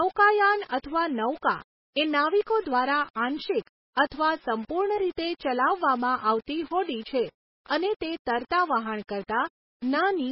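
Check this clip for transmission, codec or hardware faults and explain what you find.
Two faults run through the whole recording, both affecting the speech from start to finish.

The first is low bit depth without dither. The speech is carried by very few amplitude steps, and the behaviour fits roughly a 6-bit quantiser that rounds each sample to the nearest step with no dither added. Because the error follows the signal instead of forming a steady noise floor, quiet passages and decaying syllables turn grainy and gritty. The distortion sits around 25 dB below the speech level. This is likely the cause of the grit.

The second is MP3 compression, with heavy codec damage. Nothing is present above 5.5 kHz, which gives a dull, band-limited sound that removes much of the sibilant detail. The degradation fits a very low bitrate of about 16 kbps. At that rate the encoder likely runs short of bits and discards weak frequency components. 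Those components switch on and off between frames, producing a watery, swirling texture with smeared consonant attacks.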